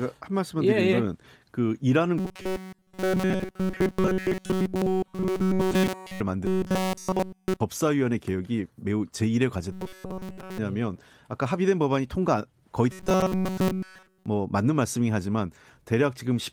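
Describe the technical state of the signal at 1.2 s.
At 1.2 s the speech signal is intact, with no dropout, click, distortion or other fault audible at that moment.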